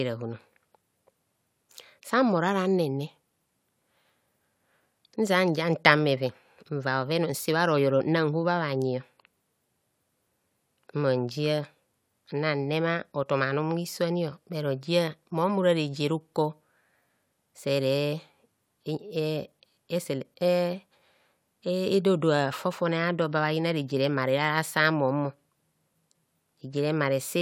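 No technical faults can be heard anywhere in the speech recording. There is nothing to place on a timeline.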